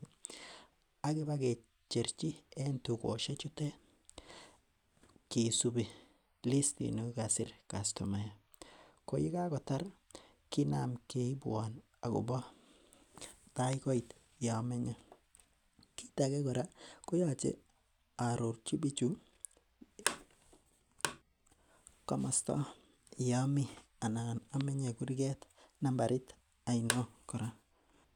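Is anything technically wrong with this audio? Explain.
Yes. Two loud pops hit at 13.73–13.75 s and 24.61–24.63 s. Each is a single sharp click, roughly 15 dB above the speech, which continues underneath. The likely cause is a brief voltage spike, from static, a switch or a connector, entering the signal path.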